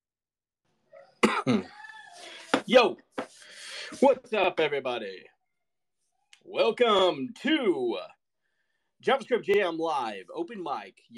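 Short stutters come at 1.89, 4.44, 6.99 and 9.54 s, each repeating about 48 ms of sound. This is overlapping chunks: the audio was handled in 2.5 s blocks, and each block began slightly before the previous one ended, so every join plays twice.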